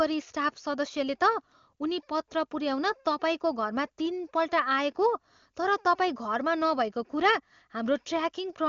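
No faults are audible in the speech; the audio band stops at 7.2 kHz, consistent with an AMR wideband (HD Voice) codec path running at its highest rate.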